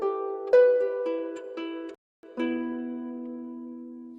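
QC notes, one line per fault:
1.95–2.23 s, playback stall: the output drops to silence for about 286 ms in mid-flow, then resumes. The gap is too long and too clean to be a dropout within the signal itself; it sounds like the player had nothing to send to the output for that stretch. The likely cause is the playback buffer running dry or the audio thread being blocked, so no samples reached the device until it recovered.
2.23–4.05 s, time-compressed catch-up: immediately after the stall, the audio runs about 1.15 times faster than normal for roughly 1.8 s, yet the pitch stays where it was. This is the player working off its backlog by removing short slices of audio and cross-fading across the joins. That keeps the pitch intact but hurries the timing.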